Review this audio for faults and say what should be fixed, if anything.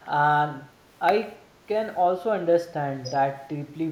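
The speech dips sharply at 0.03–0.1 s, by about 15 dB, and again at 1.39–1.65 s, by about 10 dB. The likely cause is speech suppressed in double talk, with the echo canceller ducking the talker while the far side speaks. The waveform and spectrogram show brief attenuated notches. Better double-talk detection would prevent it.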